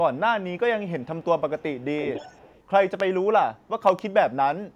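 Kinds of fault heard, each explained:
Echo leak: a loudspeaker echo canceller likely passed residual pickup back, adding a 286 ms delayed copy, faint near 1.0 s and clearly audible from 1.79 to 2.63 s.
Loud pop: a sudden voltage pulse, likely from a plug, switch or static, adds a sharp pop at 3.0 s and a double pop near 3.9 s.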